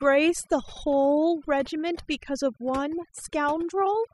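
A short speech recording suffers from overdone noise removal from start to finish: a noise reducer set far too aggressively has pushed individual frequency bins down or out wherever their level sat close to its noise estimate. The pauses collapse into near silence sprinkled with twinkling specks. On a spectrogram the background shows as scattered isolated dots, with speech harmonics broken into patchy fragments.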